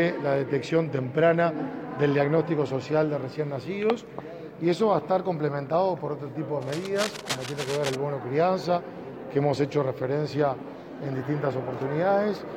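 From 6.62 to 7.95 s there's a burst of cable scratch noise, a dense, uneven scratchy rustle sitting roughly 10 dB under the sound. It's likely a worn lead or connector being moved, with its contact resistance jumping around rapidly.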